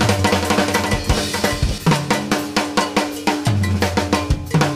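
From the very start until 1.78 s, a doubled audio track is present. A second copy of the sound runs about 0.7 s behind the first. It sits a few decibels lower, roughly 5 dB down. The copy is full-band and dry, with no decay or room colour. It ends abruptly at 1.78 s. The likely cause is the same signal arriving twice, through a slower capture path or an edit that left two copies out of step.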